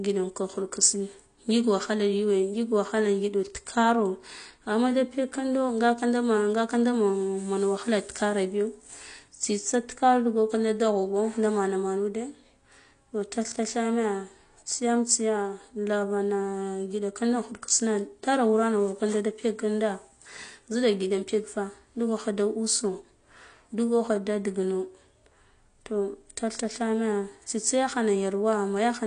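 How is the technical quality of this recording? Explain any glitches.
The technical quality is poor, with plainly audible codec damage throughout the speech. There is nothing above about 9.8 kHz, so the top end is missing and the voice sounds dull. Sibilants and sustained sounds carry a fizzy, warbling texture. This points to AAC compression, likely AAC-LC at a low bitrate, around 32 kbps. The encoder has too few bits for each frame. It drops the highest band entirely and coarsely quantises what remains, smearing fine detail across the whole recording.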